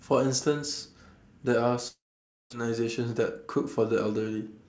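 From 1.88 s to 2.54 s, incoming packets likely stopped arriving in a long network dropout. The receiver stretched the last sound into a brief fading buzz, then about half a second of silence. Around 0.6 s of speech is gone when audio resumes, slightly shifted in timing.

At 3.10 s the jitter buffer, overfilled with more audio than it aims to hold, triggers a jitter buffer speed-up until 3.48 s. Small pitch-period pieces are cut out, about 40 ms in total, so speech runs roughly 9% faster at unchanged pitch and sounds briefly hurried.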